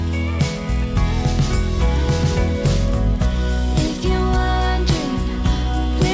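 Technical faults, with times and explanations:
0.00–4.28 s, resampler restarted on every block: a steady 25 Hz buzz rides on the sound, one small tick per 40 ms block edge, which fits a 24 kHz to 16 kHz conversion run block by block without history. Unlike mains hum, it stops when the signal falls silent.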